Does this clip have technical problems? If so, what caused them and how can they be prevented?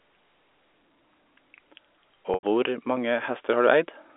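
Yes, there's one: packet loss with pitch repetition from 2.34 to 2.43 s. About 90 ms of speech went missing, which fits three dropped packets of roughly 30 ms each. The receiver bridged the hole by looping the last pitch period, so you get a brief held, buzzy tone that fades out, a moment of silence, then the speech cross-fading back in over the G.711 telephone coding. A jitter buffer with some headroom, plus forward error correction or redundant packets, would keep this from happening.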